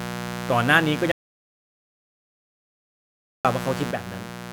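Unshielded wiring or a dimmer or rectifier is letting sharp switching spikes into the signal twice per cycle of the 60 Hz mains. From the start, a steady, raspy mains buzz runs under the speech, its harmonics stacking up into the kilohertz range, and it sits only about 10 dB below the speech throughout.

At 1.12 s the input was likely lost, through a disconnected device, a failed link or an accidental mute, while silence kept being written. The audio dropout to silence cuts the speech off mid-flow into complete silence with no room tone. The gap lasts about 2.33 s, and sound resumes abruptly at 3.45 s. Whatever was said in that stretch is gone.

From 3.91 s to the end, one stereo channel likely stopped carrying signal. In the mono sum, that one channel drops out as a sudden fall of about 6 dB in everything common to both sides. The mains buzz continues underneath.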